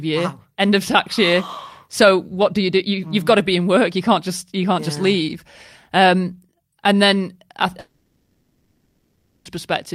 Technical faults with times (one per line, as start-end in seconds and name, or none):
7.79-9.47 long network dropout